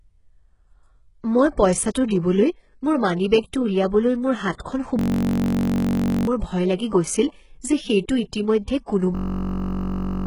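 Throughout the speech, the treble sounds synthetic, with grainy, lispy sibilants and nothing above about 11.1 kHz. The likely cause is heavy HE-AAC compression at a very low bitrate, in keeping with about 12 kbps, rebuilding the upper band from copied lower bands. A spectrogram would show the top edge cut flat and upper harmonics not continuing those below.

At 4.58 s a pre-echo spreads about 14 ms of hiss ahead of an attack, and at 8.86 s another spans about 18 ms. Block-wide quantisation noise leaks before each onset, visible as a smear preceding the sharp waveform rise.

From 4.99 to 6.27 s, a system hang loop repeats one 21.33 ms slice 60 times. That points to a 1024-sample buffer cycling at 46.9 Hz, heard as a steady buzz, and about one and a half seconds of audio is lost. It returns from 9.15 to 10.26 s with 52 repeats, losing about a second. The waveform shows an identical periodic pattern and the spectrogram shows evenly spaced 46.9 Hz harmonic lines.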